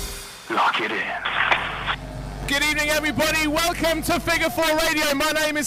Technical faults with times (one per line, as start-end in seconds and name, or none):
none